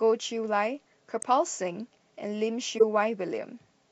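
At 1.22 s a short glitch cuts through the speech, and at 2.78 to 2.83 s a louder, longer glitch follows. Both are corrupt frames decoded: damaged bits in the compressed stream were played anyway, so misread codes and gains placed energy at the wrong frequencies across two or three frames. A spectrogram shows each as a brief vertical smear unrelated to the speech harmonics, and the waveform shows a sudden spike, the second reaching around -10 dBFS.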